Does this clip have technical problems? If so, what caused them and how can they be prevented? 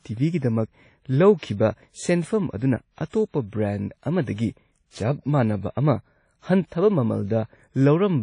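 Yes. The speech was likely passed through WMA compression at a low bitrate, and the damage is plainly audible throughout. The encoder's long transform blocks smear quantisation noise over tens of milliseconds and discard weak spectral detail, so the speech rings and sounds washy, with a hiss that rises and falls with the signal. Nothing remains above 10.1 kHz, which fits a rate around 32 kbps. To prevent this, record and deliver in a lossless format or encode at a much higher bitrate.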